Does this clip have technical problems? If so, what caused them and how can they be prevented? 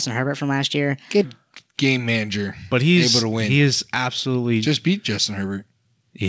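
Yes. A section at the wrong speed runs from 0.00 to 1.24 s: the speech plays 1.21 times too fast, raising pitch about three semitones, likely from resampling against a mismatched clock. Prevent it by checking that every editor, player and device in the chain uses the same sample rate.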